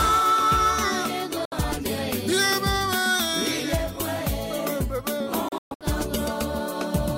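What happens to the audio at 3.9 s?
Nothing goes wrong at 3.9 s; the audio runs through that moment intact, with no dropout, click or other fault.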